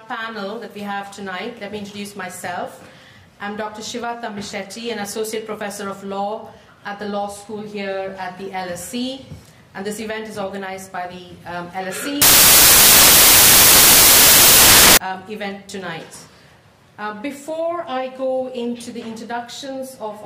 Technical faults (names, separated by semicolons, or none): samples built from the wrong bytes